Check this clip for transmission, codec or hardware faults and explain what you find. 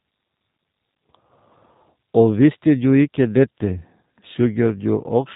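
One fault is present: G.729 codec damage across the whole speech clip. Nothing passes above 3.8 kHz. Speech is rebuilt from a filter model and sparse pulses, leaving plainly rough, synthetic-sounding voicing. That fits 8 kbit/s G.729A.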